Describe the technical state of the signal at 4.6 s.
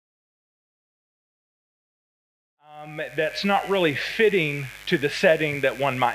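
At 4.6 s the signal carries mains buzz, present across the whole clip: switching spikes, twice per 50 Hz cycle, put harmonics up into the kilohertz range, giving a steady raspy buzz about 25 dB below the sound, now at full level after the fade-in ending at 3.71 s.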